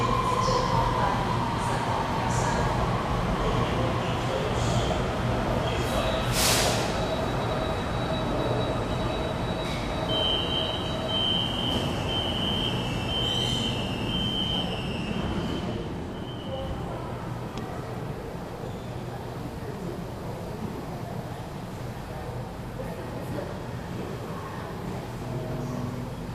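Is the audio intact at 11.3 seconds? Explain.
Yes, at 11.3 seconds the sound plays through intact, with no dropout, click, distortion or other fault at that point.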